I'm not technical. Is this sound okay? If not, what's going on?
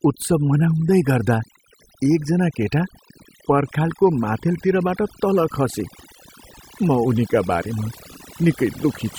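No, not quite. All the way through this speech clip, there's overdone noise removal: a cleanup tool was pushed too hard, so the background drops and breaks up into little twinkling specks, and the voice's quieter parts got scrubbed away too.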